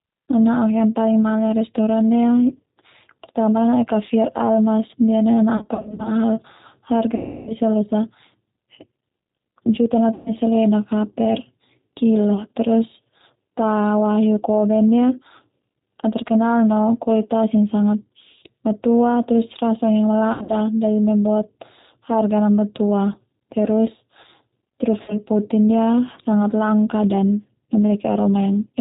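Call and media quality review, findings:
G.729 codec, whole call: speech band-limited, nothing above 4 kHz, with a slightly rough, synthetic edge. Sounds like the 8 kbit/s G.729A path. The decoder rebuilds each 10 ms frame from a vocal tract filter, a pitch predictor and a few pulses, so fine detail gets lost. Damage is plainly audible.

VoIP packet loss concealed by the speech codec, five spots. The first is 5.57–6.12 s, with 240 ms gone in short bursts of up to 40 ms. The others are 7.15–7.53 s (320 ms), 10.14–10.34 s (120 ms), 20.33–20.52 s (140 ms, up to 80 ms in one run) and 25.02–25.22 s (60 ms). Each gap becomes a stretched, buzzy tone or coloured noise that fades, then the speech stays weak for a moment after it returns.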